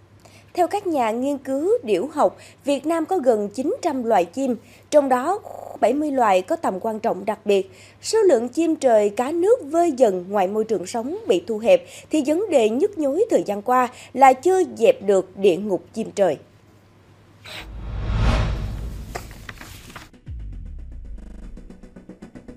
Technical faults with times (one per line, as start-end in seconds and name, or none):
5.48-5.76 system hang loop
21.20-21.44 system hang loop